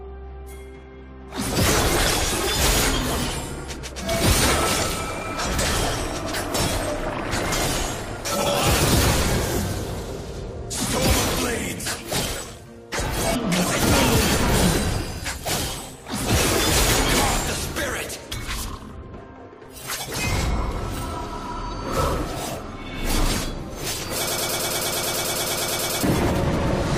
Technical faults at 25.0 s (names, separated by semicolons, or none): broken-record loop